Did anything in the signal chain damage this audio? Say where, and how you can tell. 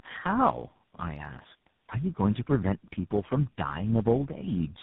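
Yes, tandem speech coding at the codec stage: the call was re-encoded through about four speech codecs in a row, with nothing above 3.8 kHz, leaving speech rough, muffled and warbly throughout.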